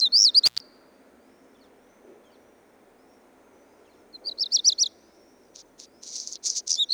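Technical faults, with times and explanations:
0.46–0.60 s, intermittent contact: a loose plug or cable connection opens briefly, breaking the signal path for about 128 ms. The sound drops out abruptly, with crackle as the contact breaks and remakes, and faint hiss fills the gap.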